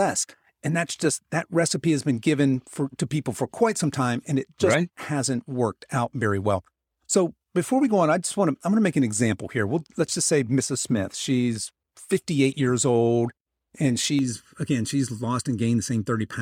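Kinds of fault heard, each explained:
Channel delay (comb filtering): From 14.19 s to the end of the speech, the sound turns hollow and phasey, with a thin quality as though heard through a tube. One channel arrives late by a little under a millisecond, and when the two are summed to mono, the shared content cancels at evenly spaced frequencies. That leaves fixed notches, the first around 700 Hz and further ones repeating regularly above it.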